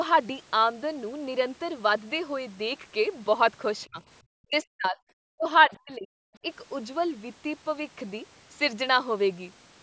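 Between 3.86 and 6.11 s the speech drops away in four chunks, at 3.86–4.0, 4.42–5.0, 5.37–5.47 and 5.67–6.11 s, each time nearly vanishing. It's likely speech suppressed in double talk, with the echo canceller ducking this talker while the far end spoke.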